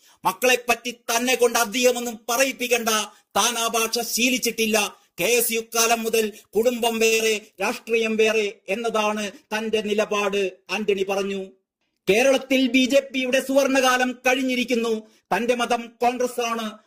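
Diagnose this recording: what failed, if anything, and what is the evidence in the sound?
Pre-emphasis left on, analogue or broadcast chain: from 0.0 to 7.59 s the treble is about 13 dB too hot at 10 kHz, matching an FM 75 µs curve never de-emphasised.

Short stall from a late packet, network jitter buffer: at 7.05 s a sound is held for 62 ms while the buffer ran dry, then resumes without loss.

Burst of packet loss, network: from 7.14 to 7.21 s the concealed sound fades over 58 ms, then playback jumps ahead, with about 60 ms missing.

Jitter buffer speed-up, receiver buffer: from 11.65 to 12.07 s the audio runs at 109% speed, same pitch, as short pitch-period pieces, roughly 50 ms total, are dropped.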